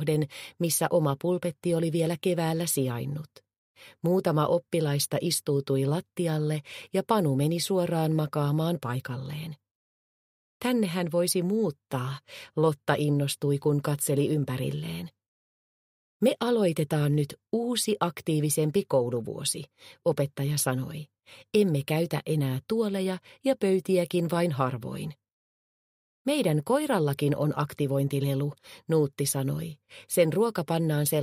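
There are no technical faults to describe at any point in the audio.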